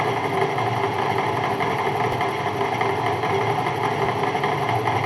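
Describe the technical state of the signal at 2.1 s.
At 2.12 s the signal has chunks out of order. One block of roughly 5.33 ms arrives a single chunk late and plays after the block that should follow it, so two short pieces swap places. Nothing is lost, but the three hard joins make a brief jumbled moment. On the waveform the trace jumps at each seam. A spectrogram shows thin vertical broadband lines clustered within about 10 ms.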